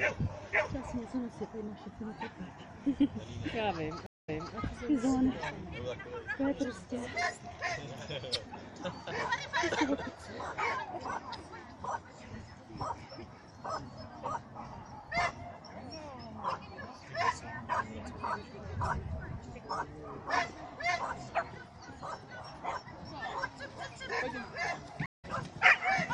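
At 4.06 s the sound drops out for 201 ms. This is a stream reconnect. The link broke, the player went quiet, then restarted its decoder mid-stream. Playback resumes 287 ms earlier, so a short stretch repeats, and it eases back in. At 25.06 s a second stream reconnect cuts 160 ms of silence. This time it picks up roughly a tenth of a second later. A small piece is skipped before the sound fades back in.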